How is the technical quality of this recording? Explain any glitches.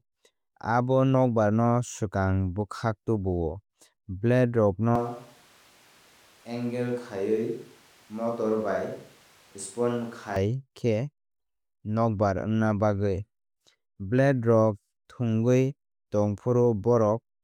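One fault stands out, a switch to a distant microphone from 4.96 to 10.36 s. The close microphone's signal likely dropped out, leaving a farther pickup. The speech turns suddenly roomy and hollow, thinner in bass, about 5 dB quieter, with room noise roughly 30 dB below it, then snaps back.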